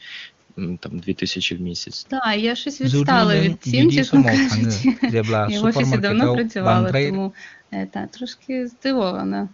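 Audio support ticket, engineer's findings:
No faults found on this one: the speech is carried over an AMR wideband (HD Voice) codec at 23.85 kbit/s, with the top end stopping at about 7.3 kHz as expected for that path, so there's nothing here to chase.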